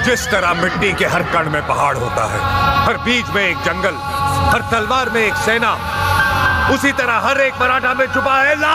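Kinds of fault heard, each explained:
Gain pumping: throughout the clip the level is pulled down under each loud sound, swinging by something like 15 dB. The likely cause is gain set far too high for the microphone, with a fast limiter or compressor clamping down on every peak, which leaves loud and soft parts squashed close together. Unlike a noise gate, the gaps don't fall silent.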